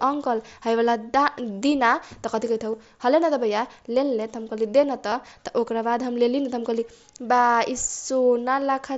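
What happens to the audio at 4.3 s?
Nothing goes wrong at 4.3 s: the speech carries straight through that moment, with no dropout, click or other break.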